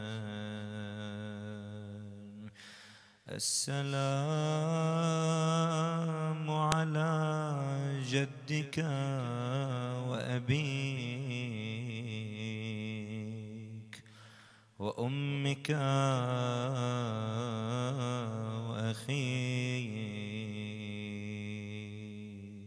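At 6.72 s a sharp, loud click marks a file header played as audio: a second piece was joined on with its header left in, so those bytes play back as samples. The waveform shows a single near-vertical spike, and the spectrogram shows a thin broadband stripe.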